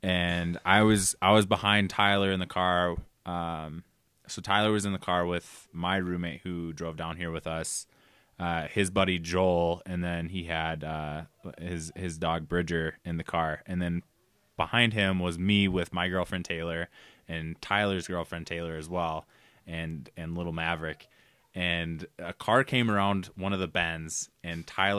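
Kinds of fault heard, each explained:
Nothing stood out on listening to the speech in this recording.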